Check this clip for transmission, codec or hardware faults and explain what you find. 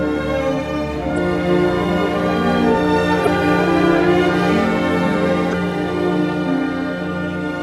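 There is one fault type, damaged data in a compressed stream, at 1.14–1.18 s, 3.23–3.27 s and 5.50–5.54 s. Each time, corrupted bytes make the decoder misread frames and lose sync until it finds the next frame header, producing a brief chirp or squawk of about 40 ms.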